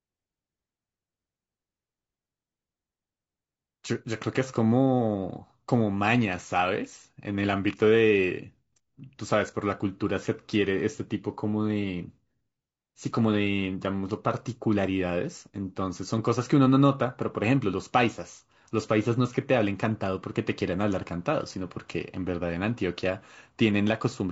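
Throughout the speech, the voice sounds rough and grainy, with noise filling the gaps between harmonics and a thin, synthetic top band. This is likely low-delay AAC compression such as AAC-ELD: its short frames resolve pitch poorly, and the damage fits a bitrate of about 32 kbps.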